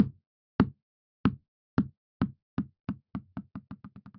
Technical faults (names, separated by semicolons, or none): none